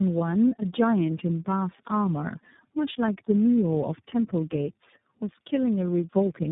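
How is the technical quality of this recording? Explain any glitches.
The recording has tandem speech coding throughout. The speech seems to have passed through three low-rate speech codecs in turn, fitting a G.729A then iLBC chain, each re-encoding the last one's errors. It sounds rough, warbly and muffled, with nothing above 3.8 kHz.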